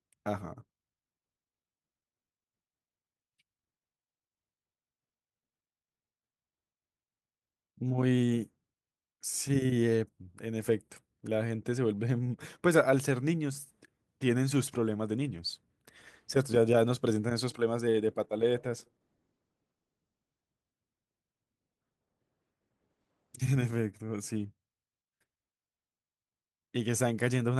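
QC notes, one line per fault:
18.24–20.53 s, call bitrate drop: the speech turns rough and watery and loses some top end for about 2.2 s, then clears. The Opus encoder was starved of bits, which fits a fall from around 32 to 15 kbps, so it coded more coarsely.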